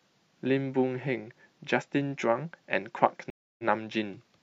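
Speech with a stream reconnect at 3.3–3.64 s: a 285 ms flatline, blank across the spectrogram, after which the restarted decoder resumes 46 ms earlier, briefly repeating material.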